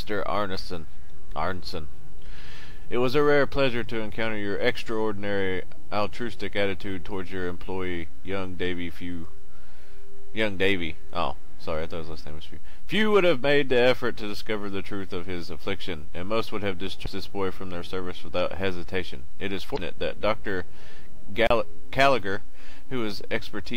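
Damaged data in the compressed stream makes the decoder misread frames and lose sync, producing brief blips from 17.02 to 17.08 s and 19.74 to 19.79 s.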